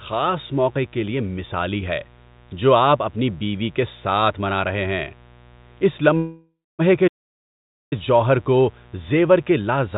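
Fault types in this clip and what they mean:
Mains buzz: A steady, raspy buzz sits under the speech for the whole clip, about 30 dB below it, built on a 60 Hz mains fundamental. Sharp switching spikes twice per cycle give it a dense stack of harmonics. On a spectrogram this is a comb of evenly spaced horizontal lines at multiples of 60 Hz running edge to edge up to the 4 kHz ceiling of the G.711 call band. The waveform shows a faint periodic ripple between phrases.
Call audio freeze: From 6.17 to 6.82 s the sound stops advancing and the last fragment is stretched into a fading tail, going fully silent for about the final 0.24 s. The likely cause is delayed packets draining the jitter buffer, with about 0.62 s of filler inserted. Nothing is lost: the speech resumes where it stopped, just later. A spectrogram shows smeared, repeating bands that decay into blank space, and the waveform envelope tapers to a flat line.
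Playback stall: From 7.07 to 7.93 s the output drops to silence in mid-flow for about 0.84 s, then picks up again. This is likely the player running out of data or its thread being blocked, so nothing at all is produced during the gap. There is no fading tail like the freeze just before it. The waveform goes abruptly to a flat line, and the spectrogram shows a clean vertical blank strip.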